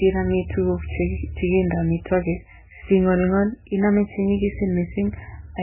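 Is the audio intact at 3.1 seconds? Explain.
No. At 3.1 seconds, as across the whole clip, the speech sounds dull and watery, with swirling, warbling detail and nothing above 3 kHz. This is likely heavy MP3 compression, which fits a starved bitrate near 8 kbps, cutting the treble and dropping weak frequency components.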